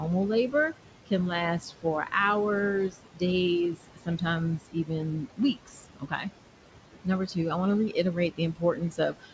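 A noise suppressor runs through the whole clip, pulling down the bands it judges to be steady noise by about 18 dB, frame by frame. It is working against room noise sitting about 11 dB below the speech. Between phrases the background sinks away, and under the speech it swells back. Nothing is heard above 8 kHz, consistent with the wideband call codec.

Speech cut by the noise suppressor occurs where the suppressor mistakes parts of the speech for noise and turns them down with the background. This happens at 0.51–1.12 s, 1.6–2.13 s, 2.9–3.22 s, 3.74–4.22 s, 4.58–6.27 s, 7.04–7.37 s (just before "I want to") and from 7.89 s (just after "I want to") to the end. The drops reach about 12 to 19 dB. Most affect brief stretches of a tenth to a third of a second, while the 4.58–6.27 s span loses around a second in total. Soft consonants and word endings sound swallowed or faint.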